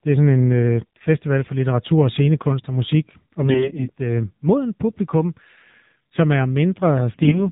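The whole thing runs through the AMR narrowband mobile codec, with no highs above 4 kHz and a clearly buzzy, synthetic edge that points to a low rate around 7.4 kbps. From 3.42 to 3.92 s and again from 7.14 to 7.46 s, AMR bit errors flip a fair share of the weakly protected bits. The voice keeps its pitch and level but goes hoarse and gargly.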